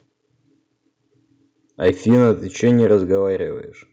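From 1.85 to 2.31 s, the speech peaks run about 4 dB past the converter's limit, likely from microphone overload. Roughly one sample in twenty has its top sheared off, giving the loudest syllables a harsh, crackling edge. At 2.15 s, the input level drops by about 2 dB in one sudden step, likely the call software turning the microphone volume down. The overload returns from 2.64 to 3.15 s, about 2 dB over and less dense. At 3.15 s a larger step down of about 7 dB abruptly lowers both speech and background.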